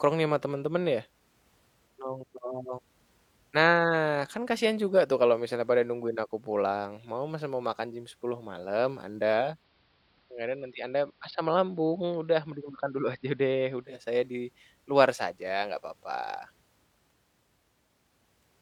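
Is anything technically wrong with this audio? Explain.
Yes. From 9.41 to 14.06 s the receiver is blending from digital radio to analogue AM: a 0.26 s crossfade, about 2 dB quieter, with faint hiss. Unlike a simple dropout, the sound continues but becomes narrow.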